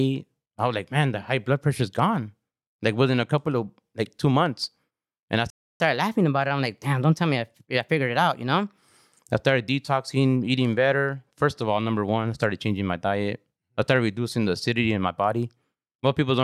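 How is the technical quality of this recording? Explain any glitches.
The recording has two linked glitches a little past the five-second mark: a short dropout followed by a stretch that runs fast.

First, a playback stall from 5.50 to 5.80 s, right after "two months and I". The speech cuts to silence for about 0.3 s, then picks up where it left off. The likely cause is the player running dry of data or its thread getting blocked.

Then comes catch-up at higher speed, from 5.80 to 8.79 s. The player burns through the backlog by resampling at 1.1x, so the speech sounds hurried and sits roughly a semitone and a half sharp. It settles back to normal just before "I started detoxing eating".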